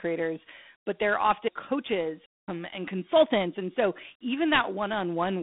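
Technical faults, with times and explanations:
Throughout, Dialogic VOX ADPCM: speech confined to a phone band near 150 Hz to 3.6 kHz, nothing above 3.8 kHz, with gritty hiss riding on it, which fits 4-bit OKI ADPCM at 32 kbps.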